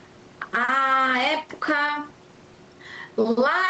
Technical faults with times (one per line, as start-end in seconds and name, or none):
0.00-3.69 gain pumping